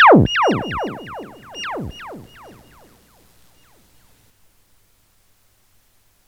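No technical faults are audible.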